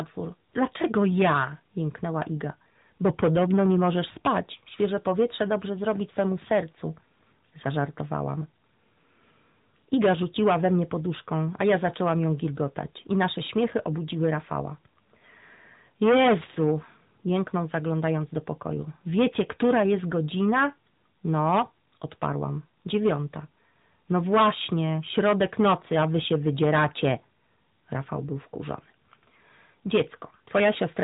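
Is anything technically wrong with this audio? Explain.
Yes, two faults run through the whole clip.

Hard clipping throughout: the speech is overdriven by about 17 dB, so about 4 percent of samples are cut flat, adding harsh, fuzzy distortion on loud syllables.

AMR narrowband mobile codec throughout: nothing passes above 3.8 kHz, and the plainly audible buzzy, synthetic coloration fits a mid-rate mode around 10 kbps.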